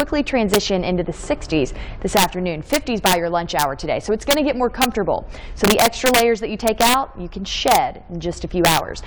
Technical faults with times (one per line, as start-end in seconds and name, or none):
0.00-9.06 integer overflow